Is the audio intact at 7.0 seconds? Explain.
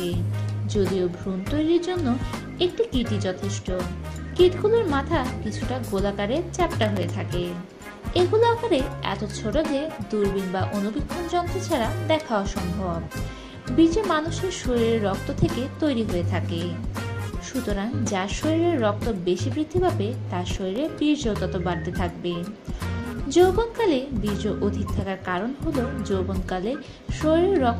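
No. From 6.83 to 7.09 s there is processor overload crackle: the processor falls behind on its very short buffers, under a millisecond each, and around ten miss their deadline. Each slot replays stale audio with hard edges, producing a brief gritty tearing.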